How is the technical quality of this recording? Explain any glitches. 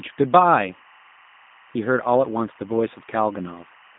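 The technical quality is poor, with two faults running through the whole recording.

Throughout, a faint, steady chirping warble sits behind the speech, well below it at roughly 30 dB down. This is timecode bleed: a linear timecode signal at 24 frames per second has leaked from a neighbouring track or cable. Its square wave flips between tones near 1 and 2 kHz, producing that buzzy twitter.

Also throughout, the speech sounds thin, boxy and slightly rough, with a synthetic, plainly audible edge. The band runs only from 150 Hz to 3.7 kHz, with nothing above 3.8 kHz. This is G.729 codec damage, which fits an 8 kbit/s G.729A coder. The coder rebuilds each 10 ms frame from a vocal tract filter, a pitch predictor and a few pulses, so the fine detail of the speech is lost.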